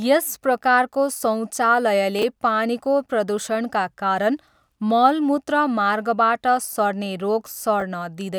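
At 2.19 s the speech briefly jumbles. Across 2.19 to 2.23 s a 10 ms chunk plays three chunks later than it should. No audio goes missing, but the sequence is scrambled and produces three hard joins. A second instance of chunks out of order is heard at 7.8 s, running to 7.82 s. There a 10 ms chunk lands one position late, which gives a shorter garble. On a waveform both spots show abrupt steps at the joins. A spectrogram shows thin vertical broadband lines at those instants.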